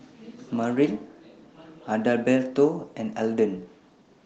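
Nothing in this speech clip stood out as a technical fault on listening.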